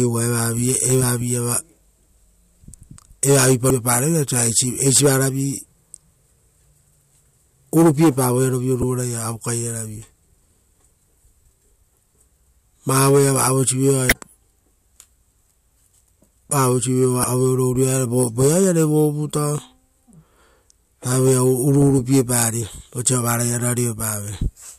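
Around 3.67 to 3.70 s the speech is interrupted by a short glitch, and the same thing recurs at 8.82 s, from 14.09 to 14.12 s, and from 17.21 to 17.24 s. That's damaged data in a compressed stream. Some bytes in the encoded file are wrong, so the decoder misreads those frames and loses sync until it finds the next frame header. Each glitch lasts only about 10 to 30 ms.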